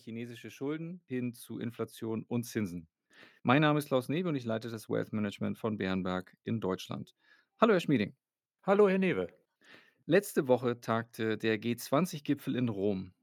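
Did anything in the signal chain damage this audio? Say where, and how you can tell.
Yes, at the call-processing stage. Automatic gain rising from 0.05 to 3.26 s lifts speech and background together by about 11 dB, as the control boosts quiet input.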